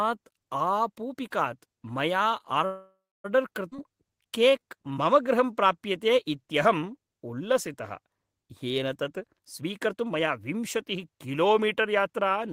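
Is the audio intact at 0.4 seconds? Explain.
Yes, at 0.4 seconds the speech plays through intact, with no audible fault at that moment.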